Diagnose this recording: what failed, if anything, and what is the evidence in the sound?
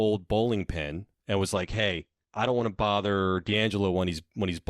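The failure is at the network stage: an adaptive stream dropped to a lower bitrate. Just after "bowling pin and was", from 1.55 s to 3.55 s, the speech abruptly takes on heavier codec artefacts, then snaps back to its earlier quality. The stepwise sound fits a switch from roughly 64 to 16 kbit/s Opus. Unlike packet loss, there is no gap, dropout or concealment warble, just a sudden quality change in both directions.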